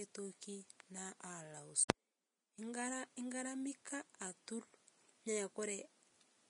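A speech recording with plainly audible coding damage throughout. Nothing is present above about 10.6 kHz. The treble that remains sounds hissy and grainy. Consonants lose their crisp edges, and tonal parts take on a rough texture. This points to Vorbis compression at low quality, likely at a bitrate around 33 kbps. At that rate the codec drops the highest band and quantises the upper detail so coarsely that it turns into noise. At 1.88 s there is pre-echo. A hiss, about 16 ms long, runs just ahead of a sharp onset, and the attack itself sounds smeared. The codec spread its quantisation noise across a whole transform block. The noise sized for the loud onset also filled the quiet moment before it.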